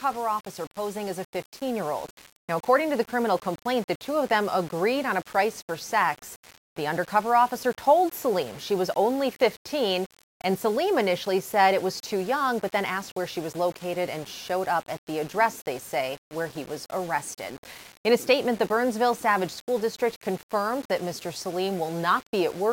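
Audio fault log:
Throughout: low bit depth without dither. The sound has a grainy, gritty distortion that tracks its level, roughest in quiet passages, where the quietest parts sputter or drop out. The grain sits roughly 20 dB below the signal. Likely cause: rounding to about 6 bits with no dither.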